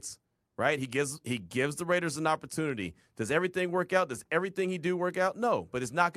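No technical faults can be heard in the speech at any point.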